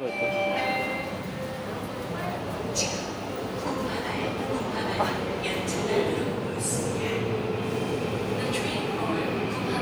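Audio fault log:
The sounds in this clip have an unbroken signal, with nothing in the playback path intruding on them at any point.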